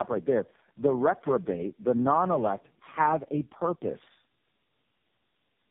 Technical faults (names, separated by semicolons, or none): tandem speech coding